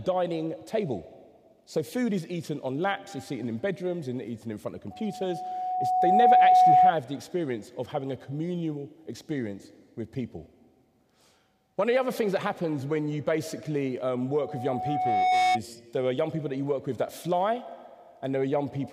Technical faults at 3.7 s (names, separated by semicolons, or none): none